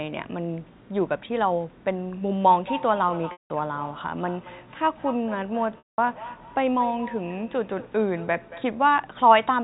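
From 2.52 to 8.88 s, each word comes back about a fifth of a second later, thinner and ringing, peaking about 15 dB below the speech. This is feedback echo between two devices: one device replays the other's microphone, and that microphone picks it up again. At 3.32 s a briefly held buzzy tone fades into silence across a 180 ms gap before the speech returns, and at 5.78 s the same happens across 200 ms. Both are packet loss with pitch repetition, where the last pitch period was looped to cover the missing audio.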